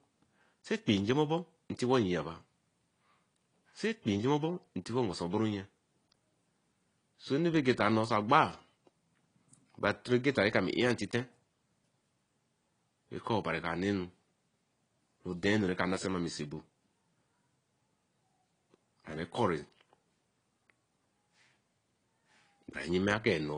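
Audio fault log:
Throughout: AAC compression. The speech sounds dull and smeared, with a warbling, fizzy texture on sibilants and sustained sounds. This is likely low-bitrate AAC-LC, around 32 kbps, with a lowered cut-off, holes across the spectrum, and coarse quantisation plainly audible.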